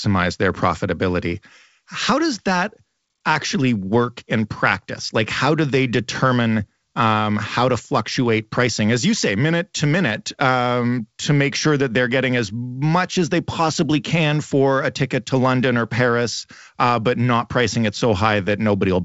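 No faults in this speech, which shows only the expected band limit of G.722 wideband telephone coding at 56 kbit/s, with nothing above 7.7 kHz.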